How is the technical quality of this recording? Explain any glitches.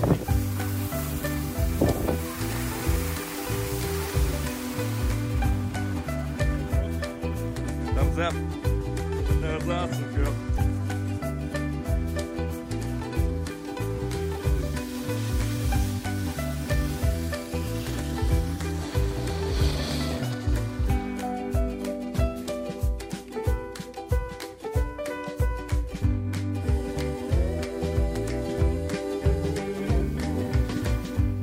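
One clear fault. From 19.94 to 27.94 s, crude rate conversion repeats samples without filtering, consistent with 44.1 to 48 kHz, adding gritty inharmonic fizz roughly 30 dB down, seen as spurious spectrogram lines.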